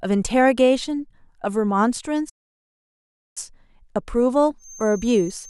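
At 2.29 s the speech cuts out and stays silent until 3.38 s, a gap of just over a second. This playback stall most likely came from the player running out of data or its thread being blocked. Its length distinguishes it from brief dropouts or clicks.

From 4.57 s to the end, a thin, steady feedback whistle near 6.3 kHz sits about 20 dB under the speech and swells and fades slowly. It is likely a loudspeaker-to-microphone loop held just at the feedback point, and unlike a runaway howl it never builds.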